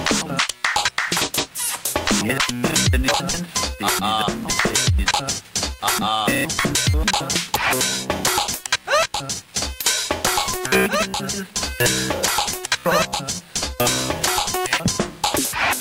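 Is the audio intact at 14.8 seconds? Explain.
Yes, at 14.8 seconds the sound plays through intact, with no audible fault at that moment.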